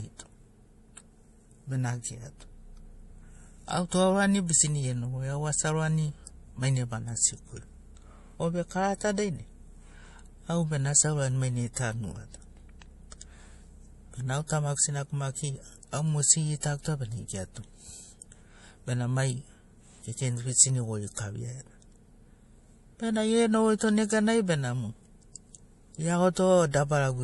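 A speech recording with two problems running through it. The whole thing stops dead at about 11.5 kHz and carries the swirly, smeared texture of a heavily squeezed MP3, yet it comes in a big, high-bitrate file. That points to low-bitrate audio saved at a high bitrate. It was likely first encoded at something around 48 kbit/s and then re-saved at 256 kbit/s, so the second pass just preserved the damage and the missing top end. On top of that there are faint single-sample clock slip clicks, a soft tick roughly once a second from 0.98 s through 26.62 s. They're easiest to catch on the louder, sustained parts of the speech. That steady spacing is the giveaway: two devices were likely running on unsynchronised clocks that drift apart by around 20 parts per million, so a sample gets dropped or doubled each time the gap reaches a whole sample.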